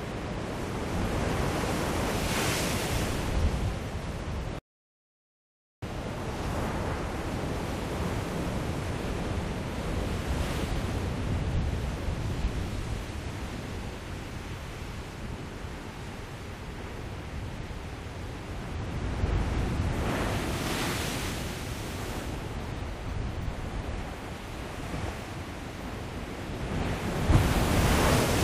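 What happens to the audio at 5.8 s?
At 5.83 s the audio resumes after a rebuffering stall that began at 4.59 s. The player exhausted its downloaded audio and paused for about 1.24 s of silence, then picked up exactly where it stopped, so no sound is lost and only time is added.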